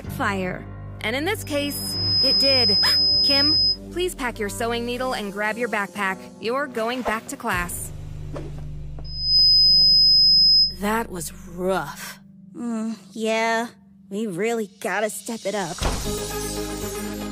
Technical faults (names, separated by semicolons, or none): loudspeaker feedback squeal